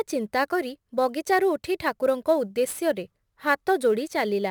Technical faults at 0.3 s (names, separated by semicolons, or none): sample clock jitter